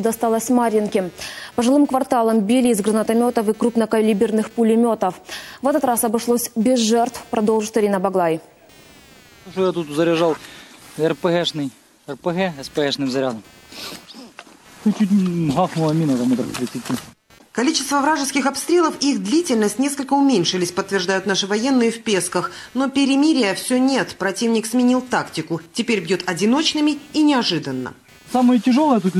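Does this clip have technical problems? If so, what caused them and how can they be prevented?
Yes. Computer activity noise runs through the whole clip as a buzzing pulse at around 200 Hz, sitting roughly 30 dB below the sound. Changing load from the processor, graphics card or mouse disturbs the ground shared with the audio circuit, so the buzz follows the computer's activity rather than the sound. On a spectrogram it shows as evenly spaced horizontal lines at multiples of about 200 Hz. In the waveform it is a low ripple under the sound that rises and falls with the computer's activity. It can be prevented by using a USB audio interface with an isolated or separate ground, or a ground-loop isolator, and keeping the audio path away from the computer's internal power.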